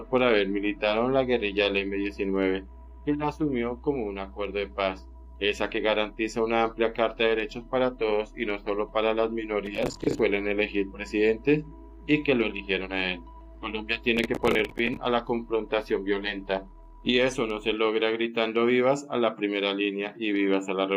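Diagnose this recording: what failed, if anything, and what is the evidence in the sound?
The driver and buffer stage failed: the processor fell behind its real-time deadlines and missed many short buffers, each around 10 ms, in quick succession. This processor overload crackle appears twice, from 9.66 to 10.19 s and from 14.17 to 14.97 s. In each burst, roughly twenty late buffers were filled with stale audio replayed with hard edges, so a gritty, tearing crackle rides over the sound and stops abruptly once the load clears.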